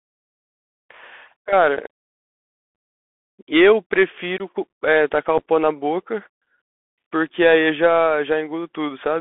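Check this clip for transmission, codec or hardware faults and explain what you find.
Two faults are present: narrowband Bluetooth headset coding throughout the speech, and three brief packet dropouts.

The Bluetooth CVSD headset codec confines the speech to about 200 Hz to 3.5 kHz. Its one-bit, 64 kbps delta stepping leaves granular hiss and scratchy s sounds, unlike the smeared swirl of a lossy wideband codec.

Unconcealed Bluetooth headset packet loss cuts abrupt holes at 2.75 s (7.5 ms), at 4.38 s (18.8 ms), and between 5.38 and 5.42 s, where short gaps scatter over 30 ms. Each time a few packets went missing and nothing filled the gap, so the breaks have abrupt edges, not the smoothed-over patches that concealment would leave.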